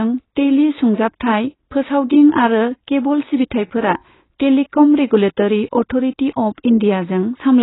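Throughout, the speech has nothing above 3.9 kHz and sounds dull, smeared and warbling, likely from heavy AAC compression, consistent with a bitrate around 16 kbps.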